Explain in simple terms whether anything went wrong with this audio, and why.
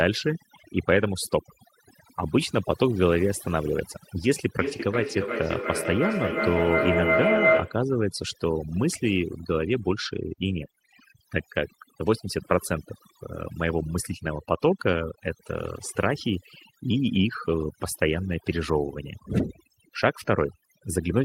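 Two things went wrong here. The whole clip has overdone noise removal: a noise reducer was set so hard that the background drops and breaks up into little twinkling specks, and the quieter parts of the speech get carved away too.

Then, from 4.59 to 7.87 s, there's a feedback howl. Sound from a loudspeaker got back into a microphone and kept getting louder on each trip round, which took roughly a third of a second, building into a tone around 700 Hz that gets about as loud as the speech.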